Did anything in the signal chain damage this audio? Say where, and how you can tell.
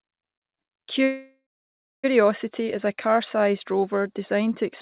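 Yes, at the network and jitter-buffer stage. Packets were likely held up in transit, so the jitter buffer ran empty and the receiver had to fill the wait. That is the call audio freeze from 1.04 s to 2.06 s. The last sound is drawn out into a fading buzz, followed by 590 ms of silence. The speech then picks up exactly where it stopped, with nothing lost, just pushed back by 995 ms. The band stops at 4 kHz, which fits G.711 mu-law.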